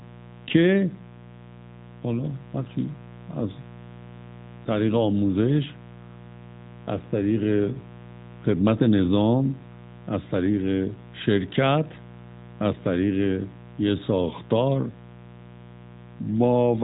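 A raspy mains buzz runs under the speech from start to finish. Sharp switching spikes at twice the 60 Hz mains rate spread harmonics well up the spectrum, sitting roughly 20 dB below the speech, steady and edgy rather than a smooth hum.

The whole clip also passes through the AMR narrowband mobile codec, so nothing above 3.8 kHz survives, leaving the speech thin and muffled. Its pulse-driven vocal-tract model adds a plainly audible buzzy, synthetic edge, which fits a mid-range mode around 10.2 kbps.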